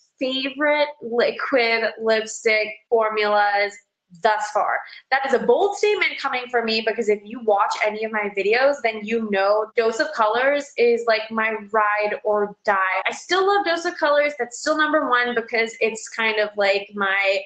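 No technical faults can be heard in this audio.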